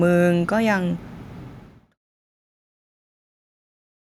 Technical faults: none

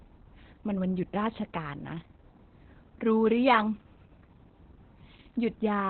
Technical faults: Opus voice compression

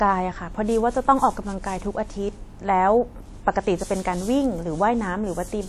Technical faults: WMA compression

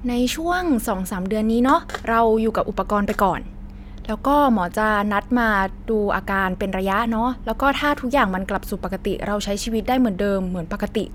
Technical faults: none

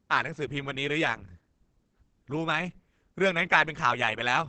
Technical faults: Opus compression

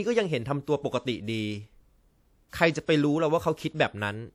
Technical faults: pre-echo

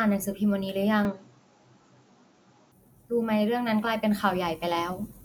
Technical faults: input switched to a poorer device

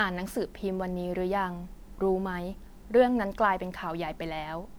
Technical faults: generation loss

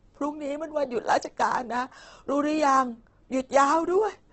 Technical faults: Opus compression

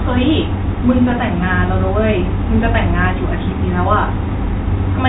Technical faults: none

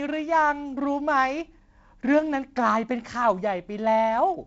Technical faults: none

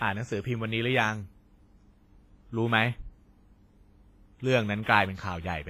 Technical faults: WMA compression; pre-echo

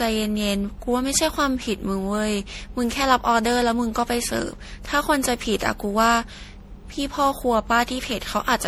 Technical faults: generation loss

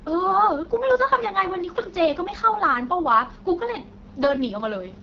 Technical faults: AMR wideband (HD Voice) codec

